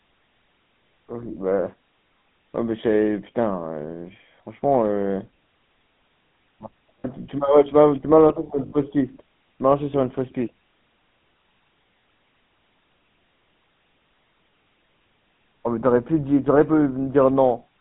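The whole clip runs through the GSM full-rate codec, and the damage is plainly audible. The speech sits in a narrow line band, roughly 150 Hz up to 3.5 kHz, with nothing bright above that. There's the familiar buzzy, gravelly grit, because the codec rebuilds the voice from a vocal-tract model fed by a sparse, regularly spaced pulse train rather than the real waveform. That coarseness fits the 13 kbps full-rate coder.

There are two spots of lost GSM frames. At 7.00 to 7.06 s, about 40 ms goes missing, which fits two 20 ms frames. At 8.66 to 8.73 s, it's about 60 ms, which fits three. In each gap the decoder keeps replaying the last good frame's settings, so instead of a clean gap you hear a short, rough, metallic ring hanging on the sound before normal speech picks up again.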